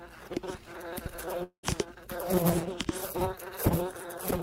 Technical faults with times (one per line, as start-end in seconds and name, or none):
1.43-1.65 long network dropout